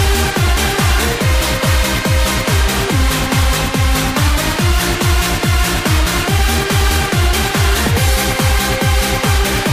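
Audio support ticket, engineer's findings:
No faults found on listening. Nothing in the audio points to a problem in the capture, processing or transport path.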